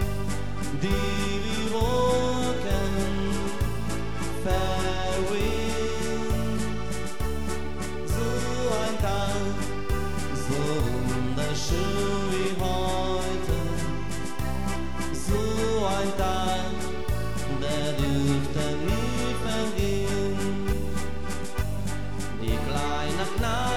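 No technical faults are audible anywhere in the clip.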